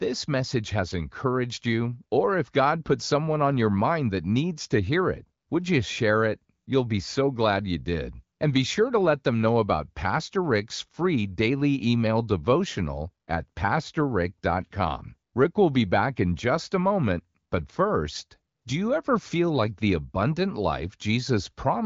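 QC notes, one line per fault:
No faults heard in this speech recording.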